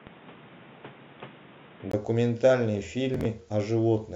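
From the start up to 1.93 s the speech sounds dull and boxy, with nothing above 3.8 kHz, and a new background noise sits maybe 30 dB under it. Then there's a 20 ms gap, the level shifts by around 5 dB, and the full band comes back. That's most likely an input switched to a poorer device, such as a headset's call profile, before it swapped back to the proper microphone.

Later, between 3.14 and 3.25 s, there's a short Bluetooth stutter. About 53 ms of audio goes missing, spread across roughly 107 ms, and the longest single hole is 13.3 ms, which points to about four dropped packets. The receiver fills each hole by replaying its last little slice, so you hear a brief stutter before the speech carries on, as though it had kept playing underneath.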